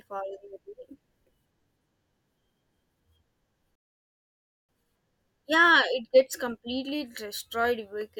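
Speech, with a rebuffering stall from 3.75 to 4.69 s. The player ran out of audio and fell silent. Playback resumes where it stopped, adding 0.93 s.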